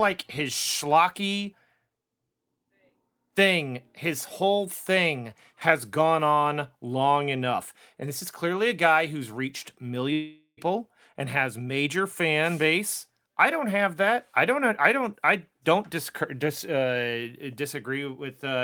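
At 10.13 s, just after "a guy who's reached", a long network dropout likely cut off about 0.44 s of speech. The receiver extended the last sound as a fading buzz or hiss, then about 80 ms of silence, before audio resumes at 10.59 s with "and has major fan", with the missing part lost.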